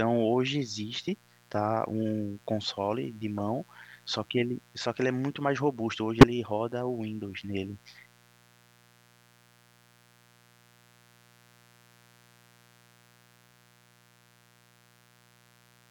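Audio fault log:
Throughout: mains buzz. A steady, raspy buzz sits roughly 30 dB below the speech, built on a 60 Hz fundamental with a dense ladder of harmonics reaching into the kilohertz range. Sharp switching spikes, twice per mains cycle, leaked into the signal path and produced that harmonic spread. The bright, rough edge and the unchanging level under pauses set it apart from a smooth, near-sinusoidal hum, which would carry mostly the fundamental and low harmonics.
3.38 s and 6.21–6.24 s: corrupt frame decoded. Each event is a brief burst of energy at the wrong frequencies. At 3.38 s it is faint, peaking far below full scale at roughly -35 dBFS. At 6.21 s it lasts 30 ms and is much louder, near -5 dBFS, short enough to suggest a single damaged frame. Flipped bits made the decoder rebuild the audio with wrong gains and misplaced spectral energy for the length of the frame. Unlike a dropout, the sound is replaced by misplaced spectral energy.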